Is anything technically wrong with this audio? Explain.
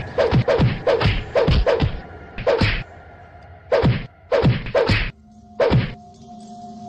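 No, nothing technically wrong turns up here, so there's nothing to flag in this one.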